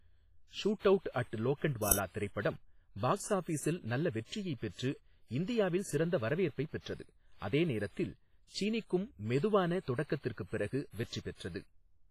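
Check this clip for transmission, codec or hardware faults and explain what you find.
Two faults are audible: coding damage across the whole clip and one short digital crack.

Throughout, the speech sounds strongly washy and ringing, with hiss that breathes with the signal and nothing above 15 kHz. This is likely WMA compression at a low bitrate, around 24 kbps, smearing quantisation noise across long transform blocks.

At 1.92 s there is a sharp crack, about 5 ms long. An uninitialised buffer was played before audio was written to it, so leftover memory came out as samples.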